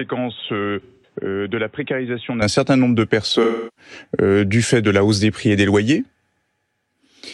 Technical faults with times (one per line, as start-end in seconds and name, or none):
0.00-2.42 input switched to a poorer device
0.81-1.15 AAC frame loss with concealment
3.42-3.91 AAC frame loss with concealment